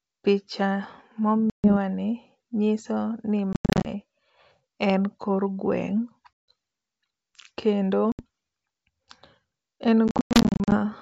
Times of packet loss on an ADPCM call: 1.50-1.77, 3.53-3.87, 6.38-6.48, 8.12-8.25, 10.08-10.77

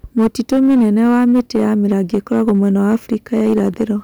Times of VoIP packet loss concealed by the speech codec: none

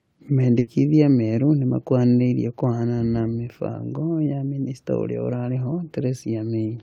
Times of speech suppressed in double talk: none

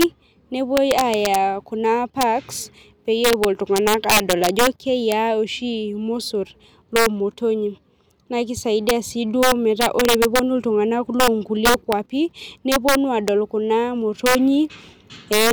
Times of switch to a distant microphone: none

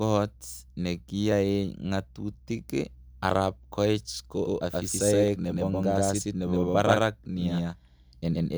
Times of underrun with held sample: none

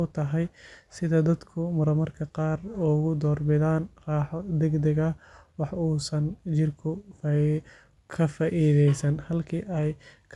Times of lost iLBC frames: none

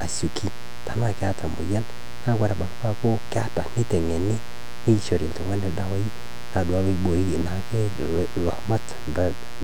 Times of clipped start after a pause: none

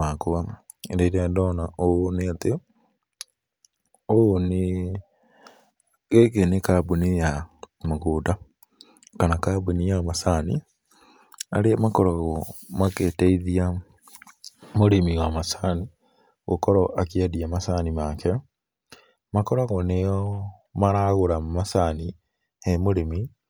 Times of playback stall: none

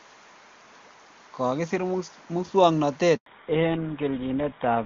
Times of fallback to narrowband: 3.26-4.86

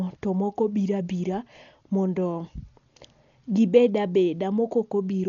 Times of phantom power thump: none

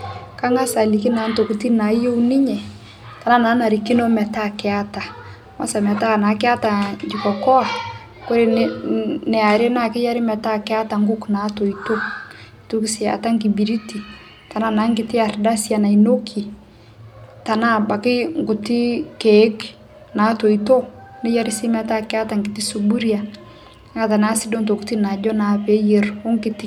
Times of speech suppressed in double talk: none

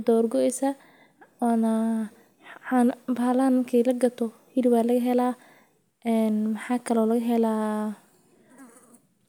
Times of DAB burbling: none

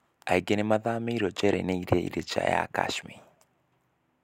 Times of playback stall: none

